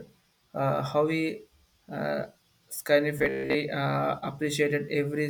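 From 3.19 to 3.56 s the speech turns into a rigid, metallic buzz near 66.8 Hz that only loosely tracks the words: robotic sound from repeated short buffers. Likely cause: audio arrived too seldom, so a roughly 15 ms slice was looped, skipping most real signal.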